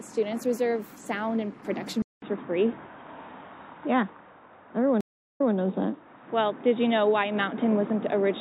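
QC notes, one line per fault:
Throughout: MP3 compression, likely at a low bitrate such as 64 kbps; sparse bits leave weak frequency lines flickering between frames, giving a plainly audible watery, swirly texture with smeared attacks.
2.02 to 8.40 s: input switched to a poorer device, after a 200 ms silence; nothing passes above 3.8 kHz, level shifts roughly 5 dB, and faint new noise enters, so the sound turns dull and boxy.
5.01 to 5.54 s: stream reconnect; 391 ms of silence, then a fresh decoder resumes the audio 144 ms earlier, so a short stretch is heard twice.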